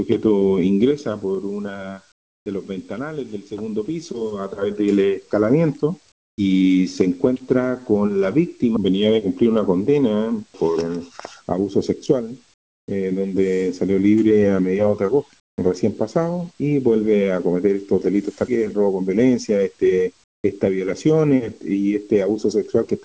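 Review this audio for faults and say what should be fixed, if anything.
Comfort noise in place of the background at 2.12–2.46, 6.12–6.38, 12.54–12.88, 15.40–15.58 and 20.24–20.44 s: the real background becomes steady, featureless hiss about 20 dB quieter, likely from discontinuous transmission. To prevent it, disable DTX on the sending side or raise the voice detector's sensitivity so quiet background is still transmitted.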